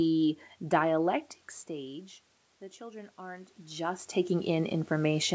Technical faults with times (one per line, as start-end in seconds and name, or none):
2.77-5.35 automatic gain rising